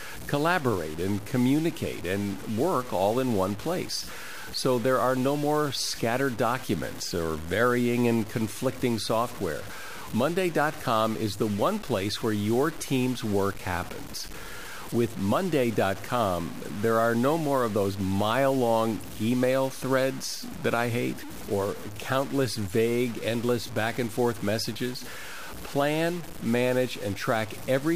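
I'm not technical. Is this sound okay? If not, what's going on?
No. From the very start to the end, the speech carries a rough, grainy fizz that follows the voice. It gets harsher on quieter syllables, and the softest moments drop to silence or sputter instead of fading smoothly. The grit is loud enough to sit clearly alongside the voice. This is likely low bit depth without dither: the audio was stored with too few steps, fitting about 5 bits, and simply chopped down to the step below. That rounding error becomes the distortion you hear.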